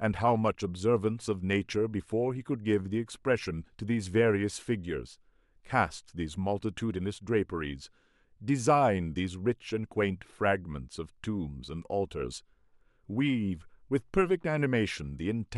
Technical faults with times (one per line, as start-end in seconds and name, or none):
none